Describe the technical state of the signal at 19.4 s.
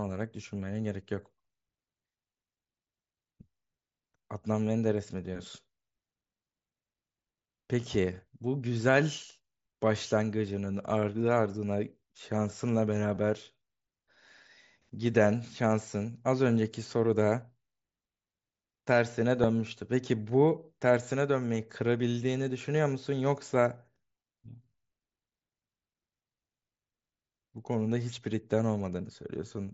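At 19.43 s there's a concealed Bluetooth headset packet loss: about 7.5 ms dropped, patched with a matching stretch of recent waveform, so it's barely audible over the mSBC link.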